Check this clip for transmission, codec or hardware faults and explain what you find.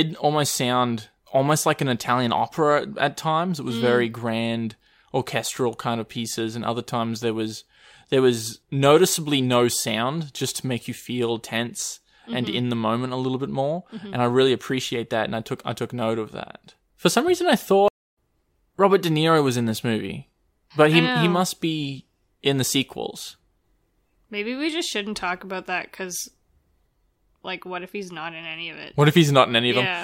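There's one fault, a stream reconnect at 17.88 to 18.17 s. The connection dropped, the player went silent for about 257 ms, then restarted decoding, so the speech resumes roughly 0.2 s further on.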